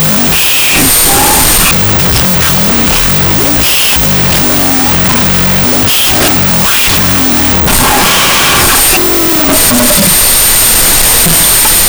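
Speech recorded as 16-bit integer samples is being read back as unsigned 8-bit, a wrong sample width throughout, so each byte becomes its own sample. The result is loud hiss with the speech buried underneath, playing at half speed and an octave low.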